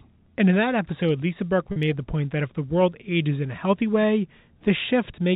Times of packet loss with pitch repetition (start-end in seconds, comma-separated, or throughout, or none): 1.72-1.76